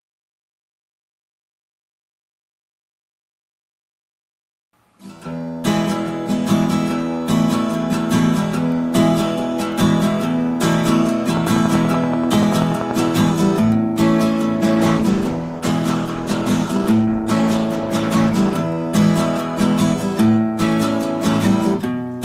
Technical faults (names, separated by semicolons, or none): train of clicks; call bitrate drop